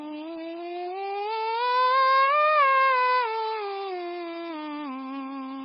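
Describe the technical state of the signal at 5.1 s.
At 5.1 s the music carries heavy MP3 compression damage, present throughout the clip. Nothing sounds above 5.6 kHz, so the treble is gone. Weak frequency lines flicker between frames, giving a watery, swirly texture. This likely comes from a very low bitrate, around 16 kbps.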